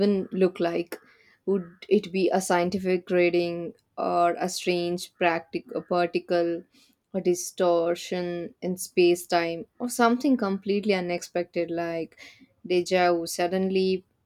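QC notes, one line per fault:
No audible faults in this speech recording.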